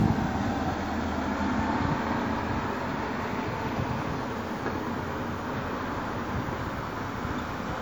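Throughout, generation loss gives swirly, hollow smearing with blurred attacks, worse than one 96 kbit/s-like WMA pass explains, likely from re-encoding about ten times; content extends to about 20.1 kHz.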